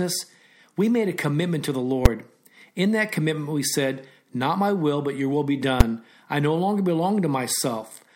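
Invalid numbers at full scale strike this speech clip at 2.06 s, after "a commitment to the", and at 5.81 s, between "but your will be" and "I no longer". Each is a single sharp bang: a calculation returned infinite or invalid values, forcing about 5.8 ms of output to maximum level, which fits a 256-sample processing block.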